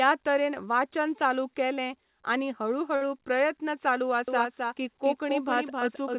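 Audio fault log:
2.96–3.04 s, short stall from a late packet: just after "चालू केलें आनी हळू", one sound hangs on about 51 ms too long. A packet arrived late and the jitter buffer ran empty. The last sound was stretched, then playback resumed. Nothing is lost, only delayed.
4.28 s to end, doubled audio track: a second copy of the speech follows roughly 300 ms behind, about 5 dB quieter. It shares the call path's band limit at 4 kHz and has no decay or room colour. It begins abruptly. The likely cause is a second capture through a slower path.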